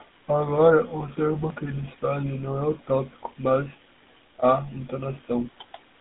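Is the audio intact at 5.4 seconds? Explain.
No. At 5.4 s the speech is still running through a GSM full-rate codec, a degradation present for the whole clip. The codec rebuilds the voice from a vocal-tract filter excited by a sparse, regularly spaced pulse train. That gives a buzzy, gravelly roughness that is plainly audible here. The band is limited to roughly 200 Hz to 3.6 kHz, with nothing above 3.8 kHz, so the speech sounds muffled and telephone-like. The result fits a 13 kbps coding rate.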